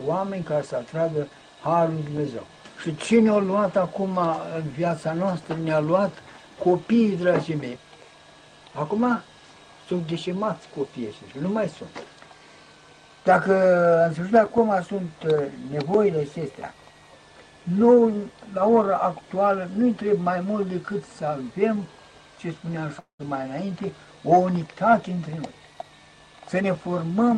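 A switching supply whistle runs through the whole clip: a thin high tone drifting between about 1.5 and 1.9 kHz at roughly 35 dB below the sound. The wandering pitch sets it apart from mains hum, whose tones sit fixed on harmonics of 50 or 60 Hz.

From 22.99 to 23.21 s the sound stalls for about 0.2 s. It continues as a fading buzz or hiss that falls silent for about 0.11 s, then resumes exactly where it stopped. This is a call audio freeze, likely from delayed packets draining the jitter buffer. Unlike a dropout, nothing is lost. The gap is inserted, and everything after it arrives about 0.2 s later.

From 25.09 to 26.50 s the sound runs about 14% fast, and roughly 0.2 s is trimmed away. This is a jitter buffer speed-up: short pitch-period slices are cut repeatedly to recover that added delay. The pitch stays put, which distinguishes it from a resampling speed change that would raise the pitch too. 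The Opus call path's roughly 12 kHz top end is audible throughout.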